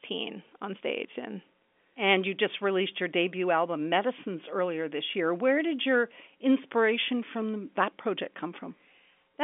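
No technical faults are audible.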